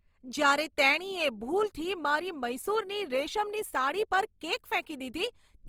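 The speech sounds grainy and rough throughout, with noise standing in for fine detail, likely Opus compression in CELT mode, fitting a bitrate around 24 kbps.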